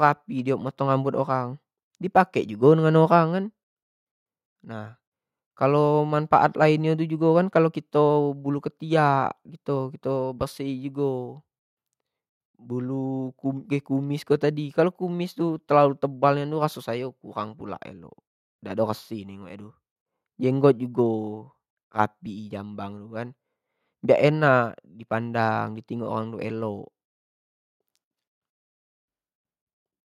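Nothing in the signal of this speech recording stands out as a technical fault at any point.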